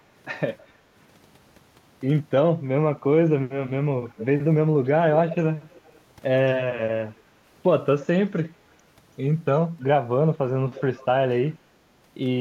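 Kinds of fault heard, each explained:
Echo leak: delayed copies of the speech return in short scraps about 0.32 to 0.33 s behind, some barely audible and others fairly clear, at 0.6, 4.1, 5.3, 5.7, 7.1 and 10.7 s, likely from a loudspeaker-side echo canceller letting part of its microphone pickup through.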